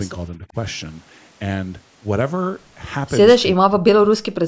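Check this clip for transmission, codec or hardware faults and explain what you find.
Two stretches of the speech drop away, consistent with speech suppressed in double talk. From 0.37 to 0.56 s the level dips by about 10 dB. From 3.52 to 4.47 s it falls by about 40 dB and is nearly cut out. The likely cause is an echo canceller turning down the talker's speech along with the far-end echo while both sides spoke at once. The call microphone processing leaves nothing above 8 kHz.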